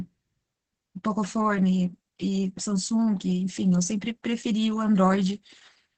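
Opus voice compression runs throughout: the SILK coder's coarse, low-rate excitation leaves speech heavily muffled, hoarse and slightly robotic, with nothing above 8.5 kHz, which fits about 10 kbps.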